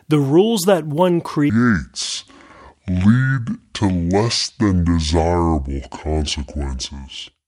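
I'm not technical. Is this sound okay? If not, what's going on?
No. Just after "the rules that one", at 1.50 s, a section at the wrong speed begins and lasts to the end: the speech runs at about two-thirds speed, so it sounds slower and much deeper at once. Pitch and pace dropping together is what sets this apart from a pitch-only change, and it likely comes from playback set to the wrong clock.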